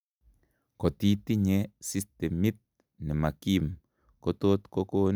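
Nothing in the speech stood out as a technical fault on listening.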